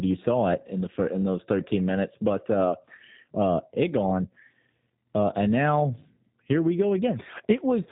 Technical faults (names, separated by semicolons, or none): G.729 codec